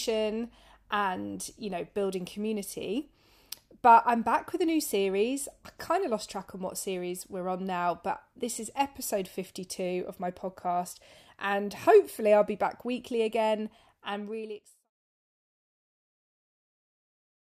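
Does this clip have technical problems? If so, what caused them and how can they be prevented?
No, the speech signal shows no technical faults, and the smooth fade-out that begins at roughly 13.5 s and is complete by 14.91 s is a deliberate editorial ending rather than a problem.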